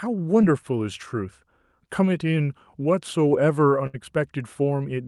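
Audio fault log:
0.41–0.45 s, short concealed packet loss: a brief smear lasting about a third of a tenth of a second. Audio never reached the decoder in time, so the receiver extended the preceding sound for roughly 13 ms and blended back, and about 20 ms of the original is gone.
3.87–3.95 s, burst of packet loss: several consecutive packets arrived too late or not at all. The decoder carried the last sound forward for about 68 ms while fading it toward silence, then playback resumed further on, skipping roughly 60 ms of the original audio.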